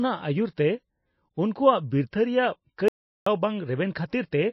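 From start to finish the speech carries plainly audible MP3 compression damage. Nothing survives above 5.8 kHz, and the band below it has a watery, swirling quality as weak frequency components flicker in and out between frames. That points to a likely starved encoder running near 24 kbps. A plain low-pass filter would dull the top end too, but it would not produce this unstable, chirpy texture or the smeared consonant onsets.

At 2.88 s, right after "ᱵᱤᱨᱛᱷᱟᱹ ᱨᱮᱭᱟᱜ", an audio dropout to silence cuts the sound off abruptly. It returns at 3.26 s, leaving a gap of 380 ms. The gap is silent with no room tone at all, which suggests the input was likely lost while recording continued. A noise gate or a natural pause would leave some residual background and would close more gently.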